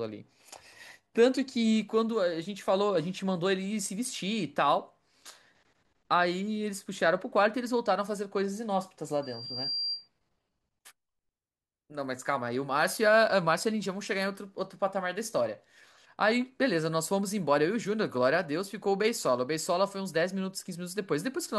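Loudspeaker feedback squeal runs from 9.22 to 10.08 s: a single tone near 4.7 kHz swells over roughly half a second into a piercing squeal, peaking only a little below the speech level. The microphone is picking up the loudspeaker it drives, and at that frequency the loop gain climbs above one, so the tone feeds on itself and keeps growing.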